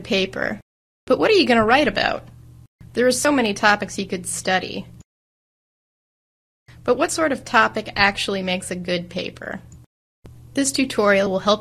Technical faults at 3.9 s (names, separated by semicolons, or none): periodic USB or driver dropouts